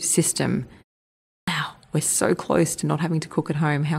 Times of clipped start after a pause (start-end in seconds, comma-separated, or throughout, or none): 1.37-1.48